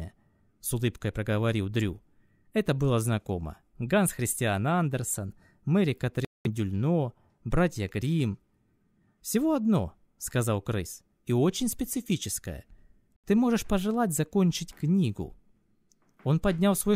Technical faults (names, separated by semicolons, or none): Bluetooth stall